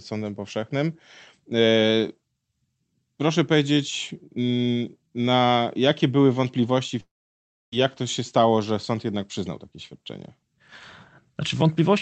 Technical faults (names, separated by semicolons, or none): long network dropout